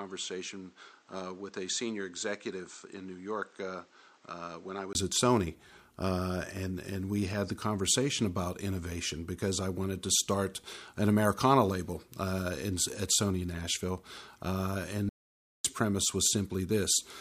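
From the start to 4.95 s the speech sounds dull, about 10 dB quieter and noisier, with nothing above 8.4 kHz; a 20 ms gap marks the switch back. This input switched to a poorer device, likely a different microphone. At 15.09 s the speech cuts to total silence for 0.55 s, ending at 15.64 s. This is an audio dropout to silence, likely from a lost input.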